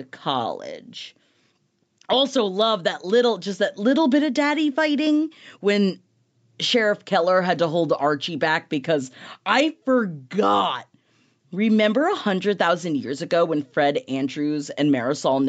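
No technical faults can be heard in the speech, which carries the ordinary character of a call path, with the lowest bass trimmed by the microphone processing and nothing above 8 kHz, consistent with a wideband Opus call stream.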